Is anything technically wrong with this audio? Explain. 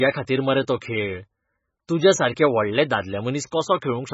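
Yes. The speech has likely been through heavy MP3 compression. The bits were spread too thin, which fits a very low bitrate around 16 kbps, so the treble is cut off with nothing above 7.6 kHz. Weak frequency lines drop in and out between frames, making the sound watery and swirly.

There is also pre-echo at 0.80 s, right after "मरे तो", and again at 1.87 s and 3.51 s. Each time, quantisation noise meant for a sharp attack spreads back into the quiet just before it. This puts a short hiss of about 10 to 13 ms ahead of the attack and softens its edge.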